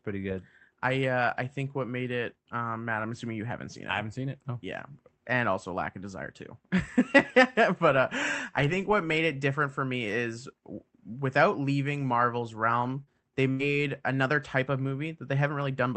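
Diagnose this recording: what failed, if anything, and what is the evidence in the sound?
The network dropped audio twice near the end, and the receiver patched both holes. The first is short concealed packet loss at 13.03 to 13.10 s: about 40 ms never arrived in time, so the decoder extended the preceding sound for roughly 36 ms and blended back into real audio. You hear it as a quick smear or wobble.

Half a second later, at 13.51 to 13.62 s, there's a burst of packet loss. Roughly 80 ms went missing in a row, which points to several consecutive packets lost or arriving too late for the jitter buffer. The concealer carried the last sound on for about 83 ms while fading it, so you get a held buzz or fading hiss. The sound then jumps ahead, skipping whatever fell in the gap. The Opus call path's top end stops around 8 kHz throughout.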